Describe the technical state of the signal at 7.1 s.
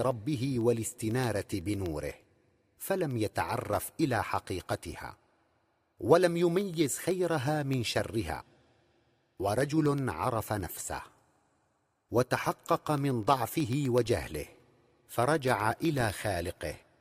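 At 7.1 s the signal sits inside a run of periodic USB or driver dropouts that spans from 0.11 s to 16.85 s. Every 0.125 s, eight times a second, something stalls the USB transfer or the audio driver, and a tiny sliver of speech, a small fraction of a millisecond, is replaced with silence. Each gap breaks the waveform abruptly, producing an evenly spaced tick that rides on the speech and goes quiet in pauses.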